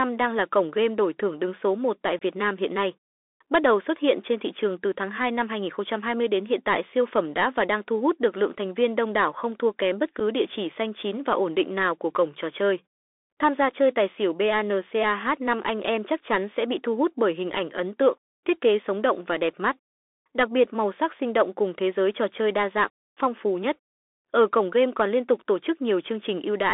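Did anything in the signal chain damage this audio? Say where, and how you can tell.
Yes. The codec stage is damaging the speech throughout. This is the Bluetooth CVSD headset codec: a one-bit delta modulator whose adaptive step can't keep up with loud, bright sounds, so sibilants come out scratchy and a granular hiss sits under everything. The sound is confined to roughly 300 Hz to 3.6 kHz, which fits a 64 kbps CVSD link. On a spectrogram, energy stops flat near 3.6 kHz, with a grainy noise floor filling the band.

The wireless link between headset and phone also shows unconcealed Bluetooth headset packet loss at two points. From 2.19 to 2.22 s, about 22.5 ms of signal drops out, consistent with a few lost packets. At 10.20 s, a 7.5 ms hole fits a single lost packet. Each gap has hard edges, and the speech returns quieter for a moment. On a waveform these appear as abrupt notches to near-flat signal. 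On a spectrogram they are thin vertical gaps.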